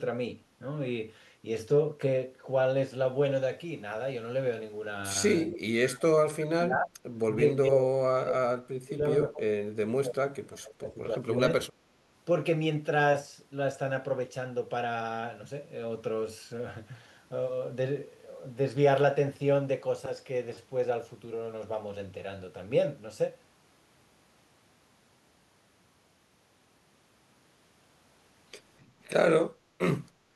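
From 5.46 to 6.94 s, 7.35 to 10.23 s and 10.43 to 11.59 s, the speech sinks by roughly 30, 35 and 25 dB: speech suppressed in double talk, likely an echo canceller muting the near talker while the far side spoke. The waveform shows the envelope collapsing, and the spectrogram shows the harmonics fading to near-blank stretches.

At 29.55 to 29.78 s and again from 30.15 s to the end, the background gated by the echo canceller dips by about 6 dB as the canceller clamps the microphone during loudspeaker playback. These appear as brief shallow troughs in the noise floor on the waveform and lighter vertical bands on the spectrogram.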